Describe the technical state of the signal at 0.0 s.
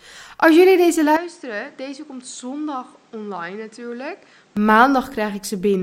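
At 0.0 s the speech signal is intact, with no technical fault present at that moment.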